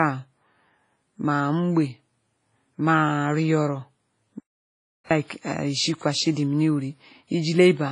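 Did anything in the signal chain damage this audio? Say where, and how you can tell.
Yes. At the codec stage, the whole speech clip shows heavy damage: nothing above 10.5 kHz, plus ringing, washy hiss that breathes with the signal. This is likely WMA compression at a low rate, fitting roughly 24 kbps. A spectrogram would show a hard ceiling and smeared, blocky energy.

An audio dropout to silence runs from 4.40 s to 5.11 s, taking out about 707 ms. The sound cuts off mid-flow and returns with no room tone in the gap, likely from a lost input upstream. The waveform shows a flat, empty stretch.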